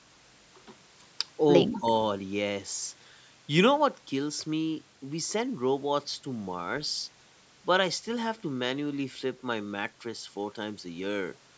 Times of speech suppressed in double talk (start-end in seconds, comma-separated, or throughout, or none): 1.74-1.86